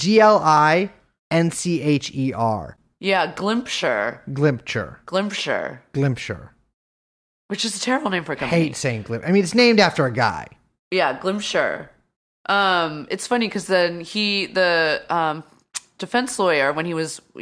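A speech recording with nothing wrong that I can hear.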